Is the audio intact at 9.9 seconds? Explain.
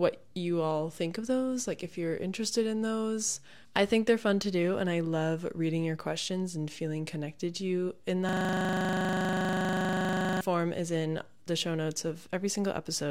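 No. A system hang loop runs from 8.29 to 10.41 s, so 9.9 s falls inside it. The computer or its audio driver stalled, and the sound hardware kept replaying the last 40 ms chunk of its ring buffer. That fragment repeats about fifty times at 25 Hz, replacing the real audio with a rigid, mechanical low-pitched rattle, somewhere between a buzz and a rapid stutter, that stops abruptly when the system recovers.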